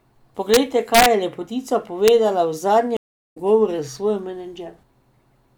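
Integer overflow occurs three times in this speech clip. The first is at 0.54 to 0.57 s, with the signal pushed about 1 dB past full scale. The second, at 0.95 to 1.06 s, is just before "je lepotica" and is about 3 dB over. The third is a brief hit at 2.08 s, just after "je lepotica", at about 0 dB. Instead of being held at the limit, the sample values wrap around to the opposite extreme. This produces hard, violent cracks, far harsher than clipping.

A stream reconnect follows at 2.97 to 3.38 s. The connection dropped and the audio goes silent for 352 ms. When it returns, a fresh decoder picks up the stream about a fifth of a second further on, so a short stretch of the speech is skipped rather than delayed. The sound fades back in, jumping forward instead of continuing where it stopped.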